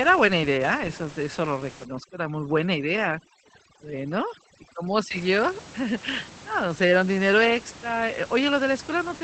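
From start to end, Opus voice compression muffles the speech and makes it hoarse, slightly robotic. Nothing sounds above 8.6 kHz, which fits a low rate near 12 kbps. From 1.85 to 5.11 s, overdone noise removal cuts bands near the room noise. The room noise sits about 19 dB below the speech. The background drops and breaks up into twinkling specks.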